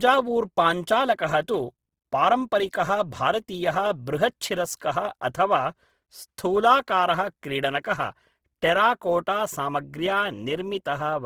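Opus compression throughout: sound is grainy and rough, likely from its music mode starved of bits, around 16 kbps, filling bands with noise or folded copies.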